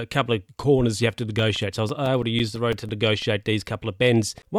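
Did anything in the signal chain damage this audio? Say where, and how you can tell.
Yes. The damage happened at playback, from a disc. These are CD scratch ticks. Between 1.39 and 3.22 s the speech carries twelve short ticks at a steady rate of about six or seven per second. The longest lasts about 7 milliseconds. That regular spacing follows the rotation of the disc. Each turn passes the blemish under the laser. The error correction cannot rebuild the lost data, so the player fills in or mutes those samples.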